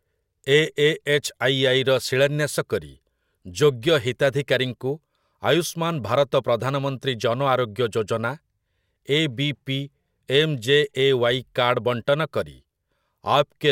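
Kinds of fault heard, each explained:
Nothing stood out on listening to the speech.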